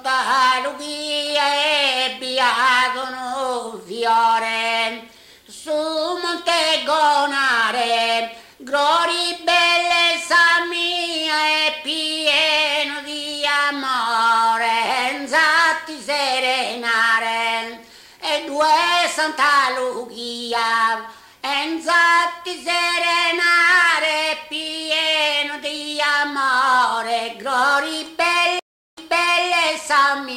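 At 28.59 s a stream reconnect breaks the audio. The connection dropped, the player went quiet for 0.37 s, then reconnected and started a new decoder mid-stream, with the server resending material so playback resumes about 0.55 s earlier than where it cut off. The listener hears a gap followed by a short stretch repeating. On a waveform this appears as a flat line near 28.6 s, then a repeat of the preceding envelope; a spectrogram shows a blank column before the returning pattern.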